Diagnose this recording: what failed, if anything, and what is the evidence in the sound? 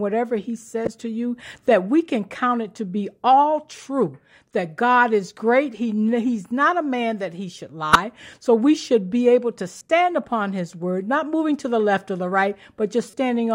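The codec stage failed: corrupt frames were decoded anyway, giving brief chirps or noise bursts at 0.85 (after "whatever he"), 4.50, 7.93, 9.78 and 13.07 s. Flipped bits misplace energy for a frame or so, seen as stray spectrogram smears and waveform spikes, loudest near 7.93 s.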